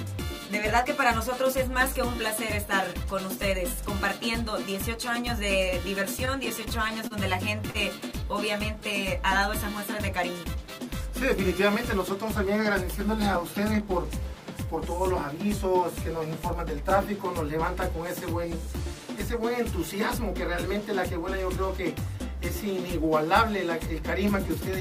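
From 6.25 to 7.13 s, packets reach the receiver late or more slowly than playback consumes them, so the jitter buffer keeps running dry. This produces repeated stalls (stutter): five brief holds where the receiver extends the last sound to cover the wait, about 69 ms in all, the longest 29 ms. Nothing is skipped, but the passage drags and catches, with the flow hitching five times in under a second.

At 7.70 to 7.77 s, a single late packet causes a short stall when the packet isn't there at its due moment and the buffer empties again. The receiver stretches the last sound for 40 ms, matching the 40 ms jump in delay, then resumes from exactly where it stopped. No audio is lost. The effect is one sound held slightly too long, with a faint buzz or dip before playback continues.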